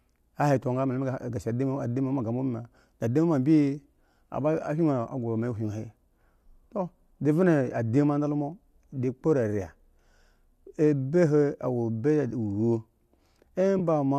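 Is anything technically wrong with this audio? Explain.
Yes. AAC frame loss with concealment occurs at 13.79 s, near the end of the speech. About 10 ms of audio, which fits a single lost frame, was patched by the decoder from the last good spectrum. This produces a brief smeared, noisy blip rather than a silent dropout. The light coding texture in the clip is likely from low-delay AAC compression.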